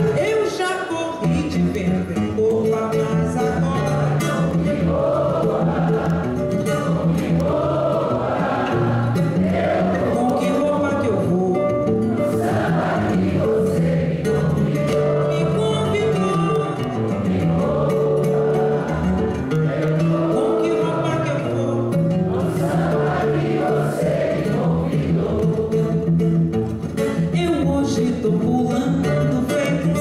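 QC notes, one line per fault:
No technical faults can be heard anywhere in the signal.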